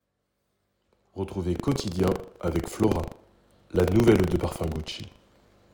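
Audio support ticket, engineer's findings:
Buffer tearing, 1.52 s to end: robotic 25 Hz buzz with signal. Writer/reader pointers slipped in output ring buffer; roughly a tenth of each period replays audio about 70 ms stale.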